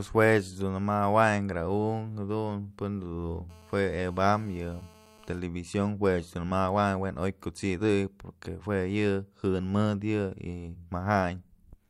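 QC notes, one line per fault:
3.50–5.39 s, GSM phone buzz. A hard, raspy buzz at 217 Hz with many harmonics sits under the speech. It stays steady, which fits a nearby phone on a call. Its radio bursts are rectified in the audio circuit. Level is about 28 dB below the signal.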